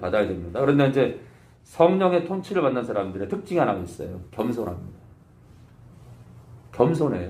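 From 3.78 to 6.08 s, crude rate conversion adds a gritty, inharmonic fizz roughly 30 dB down. It fits 32 kHz audio pushed to 44.1 kHz by repeating samples.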